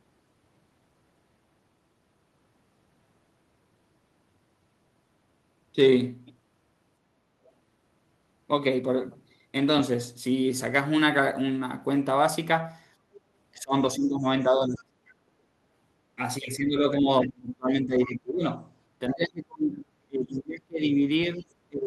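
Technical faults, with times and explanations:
13.15–13.2 s, 17.22–17.29 s and 19.1–19.14 s: other side's voice leaking through. Short, faint scraps of a second voice slip in, about 30 dB below the talker at first and about 20 dB below later. The likely cause is an echo canceller leaving some loudspeaker sound in the microphone signal.
13.54–14.93 s, 16.59–18.63 s and 19.1 s to the end: speech suppressed in double talk. The talker's voice dips and breaks up in pieces, by up to about 25 dB in the first stretch and about 30 dB later, across roughly a second and then a second and a half. This is likely the echo canceller turning everything down while both sides speak at once.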